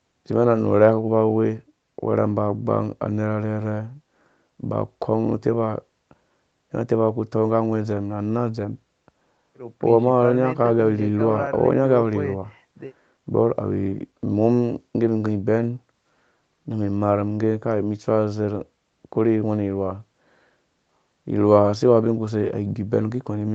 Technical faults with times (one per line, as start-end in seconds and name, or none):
none